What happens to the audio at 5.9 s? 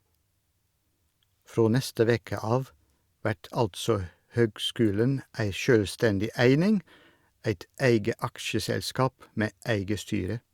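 Nothing goes wrong at 5.9 s; the speech runs through that moment intact, with no dropout, click, distortion or other fault to be heard.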